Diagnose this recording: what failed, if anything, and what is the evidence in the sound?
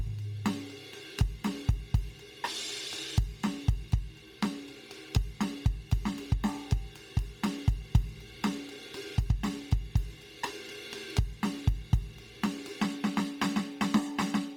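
Codec stage. The music sounds grainy and hissy up top throughout, with nothing above 20.2 kHz. Likely Bluetooth LC3 compression noise-filling discarded treble.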